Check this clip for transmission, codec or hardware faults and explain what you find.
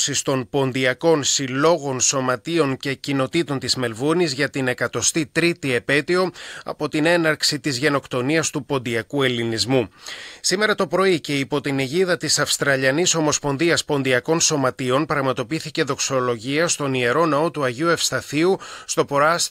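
Nothing stood out on listening that would point to a problem anywhere in the transmission, encoding or playback chain.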